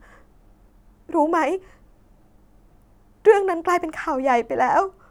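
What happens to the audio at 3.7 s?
Nothing goes wrong at 3.7 s; the speech carries on intact through that moment with no dropout, click or distortion to be heard.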